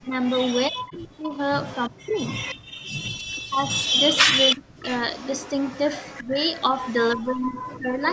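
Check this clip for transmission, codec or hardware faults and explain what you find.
Yes, there are faults, and they all come from echo cancellation on a speakerphone call.

Speech suppressed in double talk, at 0.0 to 2.17 s, 3.11 to 3.6 s, 4.55 to 4.88 s and 6.23 to 8.02 s. The likely cause is the echo canceller failing to tell the local talker apart from the loudspeaker echo while both sides spoke, so it pulled everything down. The speech dips. The early dips are very deep, with the affected stretches adding up to about a second in the first window. The last window is shallower.

Echo leak, from 0.22 to 7.12 s and again from 8.07 s to the end. Here the canceller likely let part of the loudspeaker pickup through, and that part was sent back. You hear a copy of the voice trailing 343 ms behind. Through most of the clip it is about as loud as the direct speech, which makes the sound smeared and doubled. 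In the last moments it is much quieter.

Background gated by the echo canceller, from 2.56 to 2.83 s. While the loudspeaker was active, the canceller clamped the microphone hard, by about 40 dB. For roughly 300 ms the room sound drops out to near silence, then comes back when the canceller releases. The audio is band-limited to 8 kHz by normal call processing, and that limit is not a fault.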